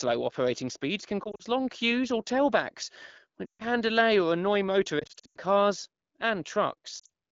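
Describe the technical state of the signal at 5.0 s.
At 5.0 s, just after "delay or annoy", lost AMR speech frames disrupt 4.99 to 5.37 s. The decoder repeats earlier settings at falling gain, causing warbling, fading dropouts up to 100 ms long.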